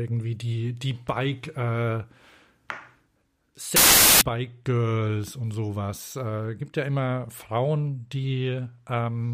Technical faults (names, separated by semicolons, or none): samples built from the wrong bytes